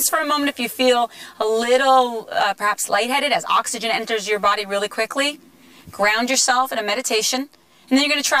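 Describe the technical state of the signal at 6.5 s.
Channel delay (comb filtering) is present at 6.5 s, as it is across the whole clip. One channel arrives roughly 10 ms behind the other, and when the two are folded to mono, the shared content cancels at a series of evenly spaced frequencies. The first notch sits somewhere around 40 Hz, with further notches repeating up the spectrum. The result is a hollow, phasey colouration that stays fixed rather than sweeping.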